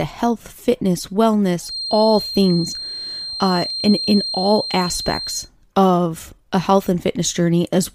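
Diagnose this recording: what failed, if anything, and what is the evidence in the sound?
Feedback whistle from 1.59 to 5.5 s: a thin 4.2 kHz tone roughly 10 dB under the speech, likely an analogue loudspeaker-to-mic loop parked at the feedback point.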